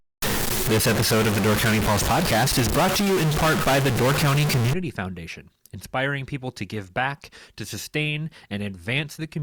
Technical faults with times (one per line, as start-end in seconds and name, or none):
0.00-4.73 stuck bit